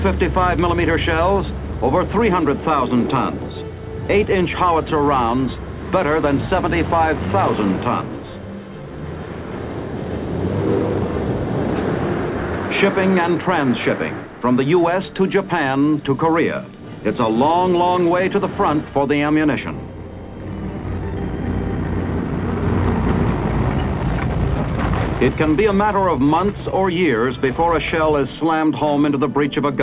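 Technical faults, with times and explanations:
Nothing stood out as a technical problem on listening.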